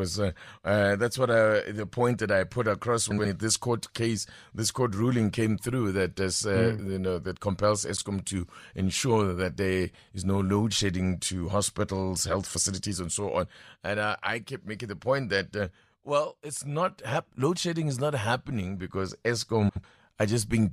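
Frames out of order: neighbouring blocks of about 70 ms at 3.10–3.26 s (after "that I put across"), and about 83 ms at 7.96–8.06 s (after "you know that compels") and 19.68–19.84 s (after "is not happening because"), were decoded swapped. Each stretch plays with its halves exchanged, giving a garbled flutter, and no time is lost.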